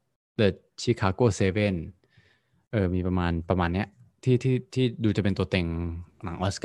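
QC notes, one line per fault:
No faults detected.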